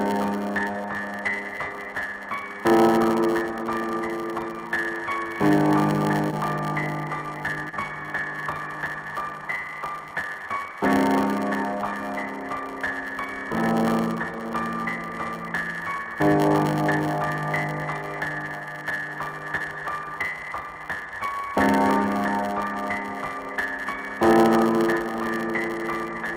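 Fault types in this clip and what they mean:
block size mismatch (padded): One stage delivers shorter blocks than the next reads, and each block's remainder is zero-filled. The regular gaps produce a steady 100 Hz buzz across the whole clip, and the audio runs at 0.919 speed, about 8% slow, with timbre roughly unchanged.
short concealed packet loss: Brief stretches of audio failed to reach the decoder in time, and the receiver extended the preceding sound to cover them before blending back. This is audible as a short smear or wobble near 6.31 s and again at 7.69 to 7.75 s.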